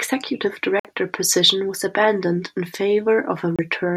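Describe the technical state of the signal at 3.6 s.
At 3.6 s the speech is just recovering from a Bluetooth dropout that runs from 3.56 to 3.59 s. The output falls silent for about 27 ms, which fits two lost packets, likely because they reached the headphones too late to play. Sound then resumes further along, as though it had kept playing.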